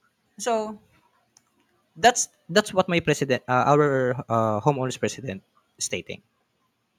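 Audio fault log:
Listening through the speech recording, nothing stood out as a problem at any point.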